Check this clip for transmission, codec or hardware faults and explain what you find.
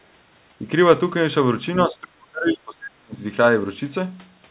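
One fault stands out, in the speech itself. From 1.86 to 3.19 s, speech is suppressed in double talk. The voice sinks by around 35 dB. The echo canceller, likely confused by both sides talking at once, attenuated the near talker along with the echo. The narrowband sound, with nothing above 4 kHz, fits a G.711 call path.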